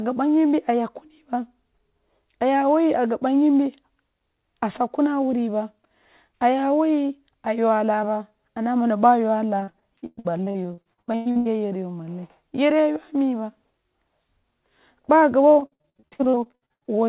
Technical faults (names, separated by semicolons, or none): repeated packet loss (robotic sound)